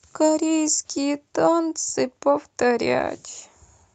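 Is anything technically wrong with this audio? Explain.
No, nothing is technically wrong with this speech clip. It has come through a call path as Opus-coded audio, and the top end stops at about 8 kHz, which fits a wideband setting.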